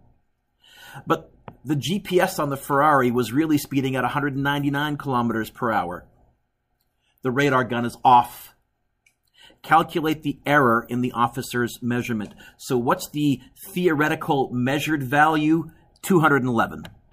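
Nothing here stands out as a technical fault at any point, so there's no problem to describe.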